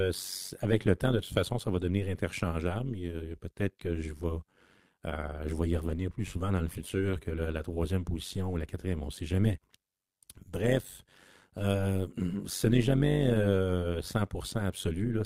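From start to finish the speech carries overlap-add ripple. Frames were rejoined with overlaps that do not sum to a constant gain, so the level pulses about 11 dB at around 100 Hz, a metallic buzz with extra tones. On the waveform the envelope shows regular scalloping; a spectrogram shows fine vertical banding.

From 5.83 to 6.01 s comes a lost packet rebuilt from error correction. Lost audio was replaced by low-bitrate copies carried in following packets, so nothing drops out, but the passage turns grainy and noisier. A spectrogram shows smeared, blurrier detail there, with no gap in the waveform.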